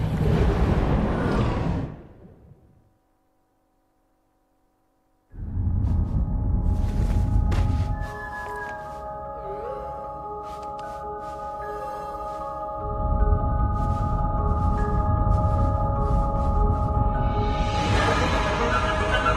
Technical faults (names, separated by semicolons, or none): adaptive stream at a lower bitrate